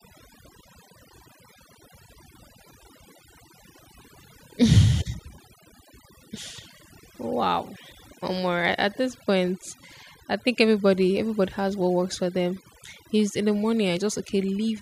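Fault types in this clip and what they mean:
overdone noise removal: a noise reduction stage pushed far too hard throughout the speech, so frequency bands sitting near its noise estimate are cut almost to nothing. Between phrases the background drops and breaks up into twinkling specks, and the voice has its quieter components stripped away.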